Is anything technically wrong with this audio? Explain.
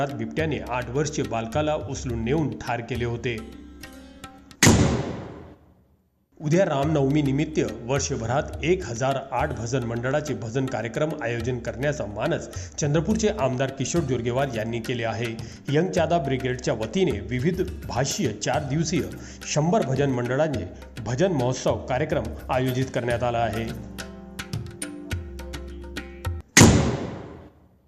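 No, nothing is technically wrong with this audio.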